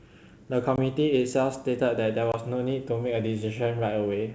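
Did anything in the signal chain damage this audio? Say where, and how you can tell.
Yes. Packet loss on an ADPCM call, network stage: 20 ms silent gaps at 0.76 s and 2.32 s, then slightly distorted speech as the decoder's predictor resynchronises.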